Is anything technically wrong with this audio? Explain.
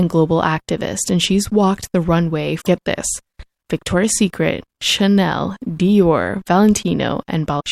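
Yes, there's damaged data in the compressed stream, and it bites twice in this speech. The first hit runs from about 2.58 to 2.68 s, right after "she's walked the runway" and before "get this". The second runs from 7.56 to 7.61 s. Each time, the decoder reads bad bytes, loses frame sync and hunts for the next valid header. You hear a short glitch where the stream breaks.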